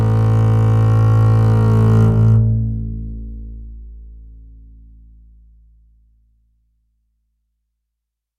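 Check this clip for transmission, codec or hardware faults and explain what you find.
A doubled audio track runs through the whole music clip: a second full-band copy trails the original by roughly a third of a second, sitting around 5 dB quieter. It is likely a second capture via a slower path or two misaligned copies in an edit. It sounds like a dry, slap-back repeat with no decay or room colour. On a spectrogram every onset reappears as a fainter duplicate at a fixed offset, and the waveform shows each transient echoed identically.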